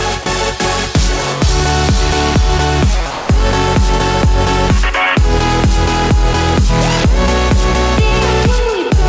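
At 0.23 s, the sound briefly gives way to flat, steady noise for 30 ms. At 3.11 s it happens again, lasting 180 ms until 3.29 s. The likely cause is sound dropped by the voice detector, with comfort noise filling the gap. The G.722 call path leaves nothing above 8 kHz.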